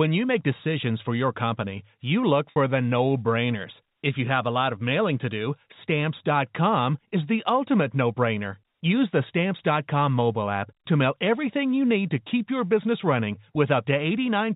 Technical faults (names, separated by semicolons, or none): packet loss with pitch repetition